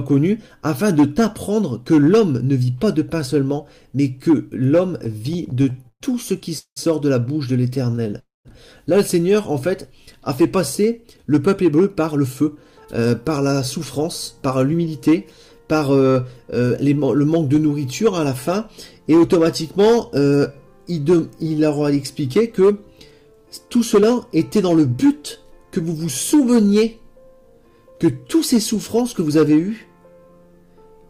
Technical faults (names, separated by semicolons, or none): repeated stalls (stutter); call audio freeze; jitter buffer speed-up; jitter buffer slow-down